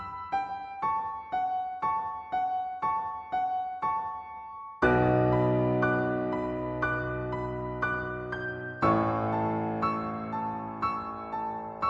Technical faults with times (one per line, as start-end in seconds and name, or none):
none